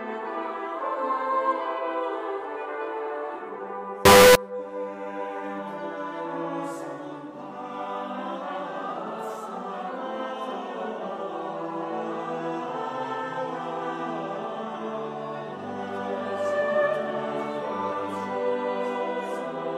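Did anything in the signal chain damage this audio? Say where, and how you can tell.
Yes, at the sample-format conversion stage. From 4.05 to 4.35 s the sound jumps to a harsh, near-square buzz at an almost fixed, high level, with background as loud as foreground. That's likely float read as integer: 32-bit float samples taken as 32-bit integers, so the sign and exponent bits set the level.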